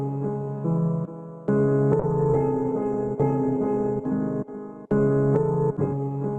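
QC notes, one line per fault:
2.01 s to end, call bitrate drop: the call's bandwidth estimate collapsed and the encoder was throttled hard, which fits a fall from about 48 kbps to about 14 kbps, with the lowest rate holding for about 2.31 s. With so few bits the codec quantises coarsely, so the sound turns rough and watery, and it narrows the coded band from 20 kHz to 12 kHz, so everything above 12 kHz vanishes and the top end dulls.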